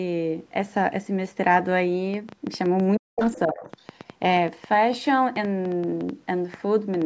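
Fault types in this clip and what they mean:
Train of clicks: Short, similar pulses tick over the speech from 2.14 s to the end, around 7.03 s. They come about six times a second at an uneven pace, roughly thirty in all. The peaks rise about 5 dB above the signal. Interference or a faulty connection is the likely cause.
Speech suppressed in double talk: The speech drops out briefly. From 2.99 to 3.20 s it falls by roughly 40 dB. From 3.46 to 3.69 s it dips by about 15 dB. The likely cause is an echo canceller that cannot separate talker from echo.
Other side's voice leaking through: A second, fainter voice comes through in scraps, from 3.21 to 3.39 s and again from 3.58 to 3.81 s. It sits about 20 dB below the speech. It is likely loudspeaker sound that the echo canceller failed to remove from the microphone.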